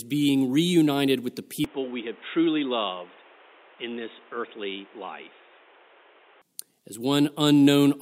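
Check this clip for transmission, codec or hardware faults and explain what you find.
One fault: from 1.65 s, just after "being reunited with the", to 6.42 s, the input likely switched to a poorer device. That path passes a narrower band and adds noise about 30 dB down. The speech turns dull and boxy and drops about 5 dB, with no gap at the changes.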